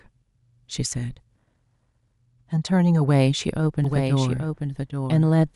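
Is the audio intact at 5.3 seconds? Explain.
No. From 3.84 s to the end, a doubled audio track runs under the speech: a full-band copy trails roughly 0.7 s behind at about 5 dB lower, likely from a second, slower capture path. On a spectrogram the speech patterns appear twice, offset horizontally, and the copy begins abruptly.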